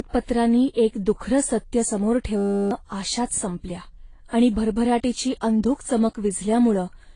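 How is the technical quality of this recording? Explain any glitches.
The recording has two problems: a coding degradation that runs through the whole clip, and one brief freeze in the middle of the speech.

Transcoding between lossy codecs affects the entire clip. The artefacts of both codecs are heard together, and nothing is present above 10.1 kHz. The likely cause is a low-bitrate AAC encode that was then re-encoded to Vorbis. The second codec spends its few bits reproducing the first codec's damage and adds its own on top. On a spectrogram this shows as a hard ceiling at 10.1 kHz, with patchy, blocky holes in the upper bands below it.

A system hang loop runs from 2.37 to 2.71 s, between "एक दुखरं सत्य समोर" and "आशाच संपल्या आणि". While the machine stalled, the audio hardware kept replaying the same 10 ms of its buffer 34 times. That produces a steady buzz at 100 Hz, and roughly a third of a second of speech is lost. 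On a waveform it looks like an identical 10 ms shape tiled end to end. On a spectrogram it appears as evenly spaced harmonic lines at multiples of 100 Hz.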